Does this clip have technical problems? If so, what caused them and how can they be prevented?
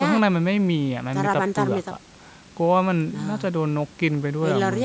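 No, there are no technical problems in this speech clip, so nothing needs preventing. It has passed through ordinary call microphone processing, which leaves nothing above 8 kHz and trims the lowest bass as expected.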